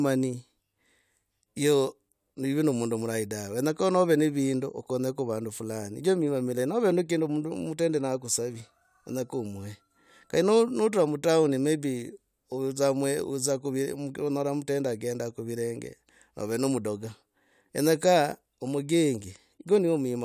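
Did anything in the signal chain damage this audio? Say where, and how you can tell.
No, nothing in this speech recording stood out on listening as damage from any stage of the signal chain.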